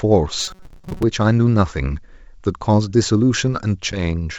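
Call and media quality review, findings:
Rigid metallic buzz near 188 Hz over the speech, 0.39–1.03 s, loosely following the speech contour. Robotic sound from repeated short buffers, likely a playout underrun: a roughly 5.3 ms block replayed, about half the audio skipped.

Hard-edged 10 ms dropout at 3.92 s, then brief distortion, settled by 4.01 s. Packet loss on the ADPCM (G.722, 64 kbit/s) call, about one packet, silence-filled, decoder predictor and step size knocked out of step with the sender.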